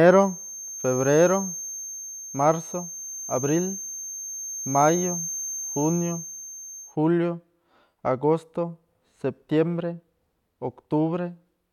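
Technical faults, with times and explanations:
0.0 to 6.97 s, feedback whistle: a thin, steady tone at 6.4 kHz sits behind the speech, roughly 15 dB down and wavering a bit in level. Likely a loudspeaker-to-mic loop hovering right at the edge of feedback without running away.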